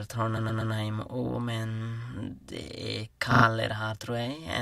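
Repeated frames: from 0.37 to 0.73 s, resent compressed frames replay a 120 ms block three extra times. From 3.31 to 3.45 s, a 40 ms block replays three extra times. Both are heard as stutters.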